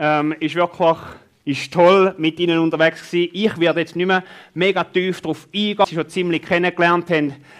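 At 5.84 s a short, harsh blip cuts through the sound, an instant of chirp-like noise that doesn't belong to what surrounds it. This is damaged data in a compressed stream: at that point the encoded bytes were corrupted, so the decoder could not correctly interpret the frame it was reading. Having lost its place, it produces a burst of nonsense output while it searches for the next valid frame header and resynchronises.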